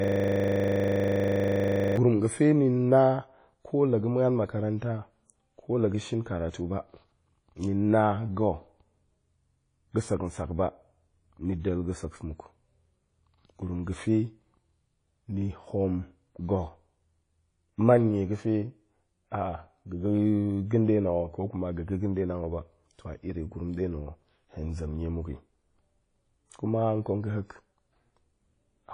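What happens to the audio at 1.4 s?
At 1.4 s a system hang loop is under way, running from the start of the clip to 1.97 s. A stalled driver replays one 40 ms buffer, producing a steady 25 Hz buzz. The speech there also sounds washy and ringing, with nothing above 10.1 kHz, likely from WMA compression at a low bitrate near 32 kbps.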